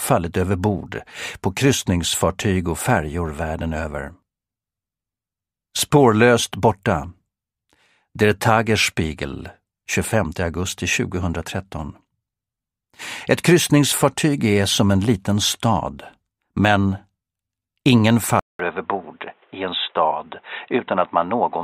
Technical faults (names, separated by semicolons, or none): input switched to a poorer device